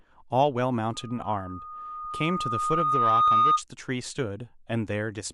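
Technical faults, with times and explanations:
0.93–3.62 s, loudspeaker feedback squeal: a 1.2 kHz tone builds over about two seconds to about 10 dB above the speech, because the microphone-loudspeaker loop gain exceeds one there.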